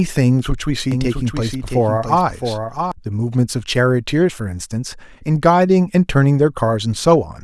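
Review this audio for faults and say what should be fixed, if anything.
A doubled audio track appears from 0.92 s to 2.92 s. A second copy of the speech runs about 0.7 s behind the original. It is roughly 5 dB quieter and covers the full band. It has no decay and no added room sound. It starts and stops abruptly at those times. The likely cause is the same signal reaching the mix twice, once through a slower path. Route each source through a single path and check for duplicate tracks before export.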